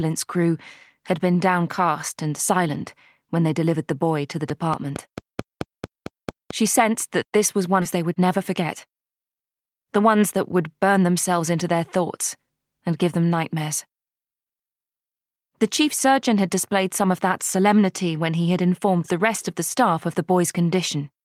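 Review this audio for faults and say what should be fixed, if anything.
Something was injecting a regular pulse into the signal path, likely electrical interference from nearby equipment or a faulty connection or power supply. The result is a train of clicks from 4.50 to 6.52 s: about ten similar pops at roughly 4.5 per second, peaking about 10 dB above the sound. Shielding cables, moving away from noisy equipment and checking connections and the power supply should stop it.

At 7.81 s the receiver discarded a stretch of audio that had already been overtaken by later packets, so playback makes a skip ahead. Around 0.7 s of sound is missing, and the two sides are butted together with no fill. A larger or better-managed jitter buffer would avoid this, because it would not have to drop audio when it overflows.

From 7.95 to 11.04 s the jitter buffer was still holding more audio than its target and drained the excess by removing short pitch-period pieces over and over. 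This jitter buffer speed-up runs the sound at 109 percent speed with unchanged pitch, cutting about 0.3 s in total, so it sounds hurried. Smoother packet delivery, or slower and gentler buffer adaptation, would prevent it.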